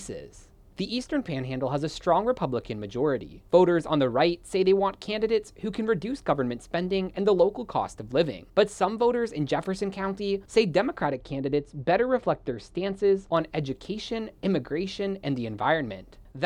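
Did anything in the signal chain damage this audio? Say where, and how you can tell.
Yes. De-emphasis applied wrongly, from 11.07 to 13.37 s. Over that stretch the sound turns dull and muffled, with the top end sloping smoothly away so that 10 kHz sits about 10 dB lower relative to 1 kHz. That gentle, continuous tilt, rather than a sharp cutoff, is the signature of a de-emphasis filter switched in at a processing or playback stage on material that carried no matching pre-emphasis, so the treble is simply lost.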